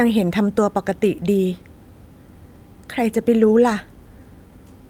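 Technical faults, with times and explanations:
1.05 s and 3.41–3.43 s, lost packet rebuilt from error correction: each time a dropped packet was replaced by a low-bitrate copy from the next, so about 20 ms of speech turns briefly rougher and noisier without a gap.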